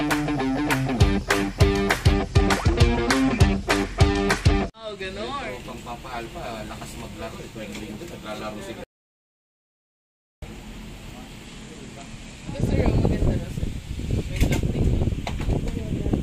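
Bluetooth SBC bit pool drops occur from 2.14 to 5.49 s and again from 11.45 to 12.75 s. In both stretches the treble turns dull and a gritty grain rises under the sound, then clears when quality recovers. This points to the sending device cutting the SBC bit pool from about 28 to 13, around 102 kbps, to keep a congested link alive. That starves the upper sub-bands of bits and quantises the rest coarsely. An audio dropout to silence runs from 8.84 to 10.42 s, a gap of about 1.59 s. The sound cuts off abruptly into silence, with no room tone, and resumes just as suddenly. Whatever occurred in that span is lost. The likely cause is a brief loss of the input, such as a dropped link or a momentary disconnect, while the recorder kept writing silence.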